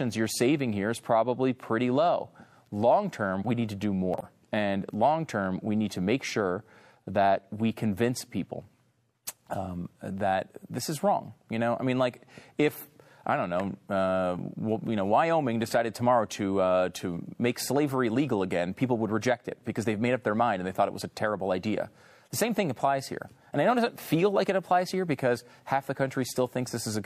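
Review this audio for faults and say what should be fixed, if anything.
From 4.14 to 4.24 s: a corrupt frame concealed, the decoder muting or patching damaged AAC data spanning roughly two frames. Protect the stream with checksums or error correction, or resend intact data, so that corrupted frames never reach the decoder.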